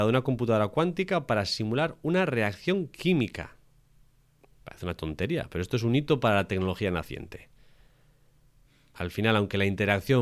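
No technical faults are audible anywhere in the speech.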